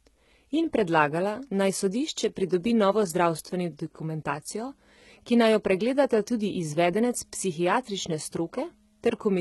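From start to finish the speech carries heavy HE-AAC compression damage, likely from a very low bitrate around 16 kbps. Unlike a plain low-pass, the treble is still present up to 11.8 kHz, but it is rebuilt rather than real, so s sounds come out gritty, metallic or lispy.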